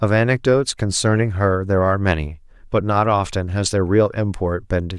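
No technical faults can be heard anywhere in the speech; the signal stays continuous and steady throughout.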